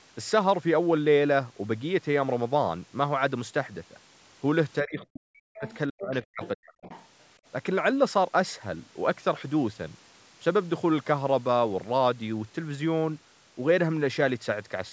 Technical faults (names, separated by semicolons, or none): speech suppressed in double talk; other side's voice leaking through